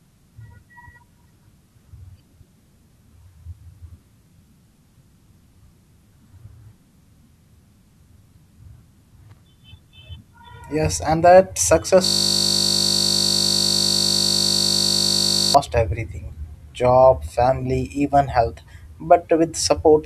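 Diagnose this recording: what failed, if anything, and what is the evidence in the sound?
Loose connector crackle, 9.30 to 9.38 s, in the analogue wiring: a brief irregular burst of scratchy crackle lasting about 90 ms. A worn or dirty contact was making and breaking as it moved, chopping the signal and adding pops from any DC on the line.

System hang loop, 12.05 to 15.55 s, at the driver or buffer stage: right after "and that success", a single 20 ms slice repeats continuously, giving a steady 50 Hz buzz until "everything job family even" resumes. The host froze while the hardware kept replaying the same short ring buffer.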